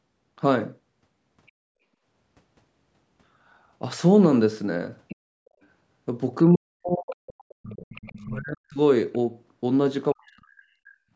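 At 5.09 to 5.16 s a faint scrap of the other side's voice leaks through, about 20 dB below the talker. The echo canceller likely left some loudspeaker sound in the microphone. At 5.45 to 5.6 s the background is gated by the echo canceller. The room sound dips by about 19 dB for a moment, then returns. From 6.49 to 7.98 s the talker's speech is suppressed in double talk. The canceller likely confused the voice with echo and cut it, by up to about 40 dB. At 7.93 to 8.25 s the other side's voice leaks through again, about 25 dB down, likely echo left behind. Speech is suppressed in double talk once more from 8.25 to 8.79 s, likely the same confusion, with the voice cut deeply. At 9.13 to 9.18 s a brief leak sits about 35 dB below, likely residual echo. From 10.12 to 10.97 s speech is suppressed in double talk again. The voice likely lost out to the canceller and drops away.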